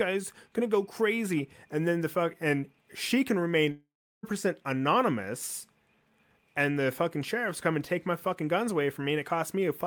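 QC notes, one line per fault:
3.71–4.25 s, long network dropout. Just after "fuck and she can", the last sound stretches into a brief buzzing or hissing tail that fades away. Then about 0.36 s of silence follows. The audio resumes at "percent anonymous" with roughly half a second of material gone, so the sound jumps forward. The likely cause is a stretch of audio that never reached the receiver. The receiver extended the final sound until that ran out, then left silence.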